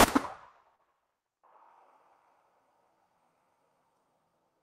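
Around 0.75 to 0.82 s there's a short concealed packet loss: roughly 40 ms of audio didn't reach the decoder in time, and the receiver papered over about 32 ms by extending the preceding sound before blending back, so you hear a quick smear or wobble.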